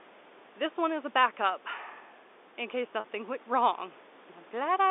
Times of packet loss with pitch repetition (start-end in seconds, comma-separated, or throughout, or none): 3.00-3.04